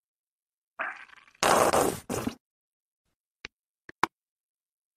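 No technical faults can be heard anywhere in the audio.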